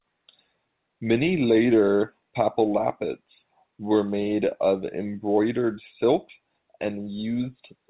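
No technical faults are audible.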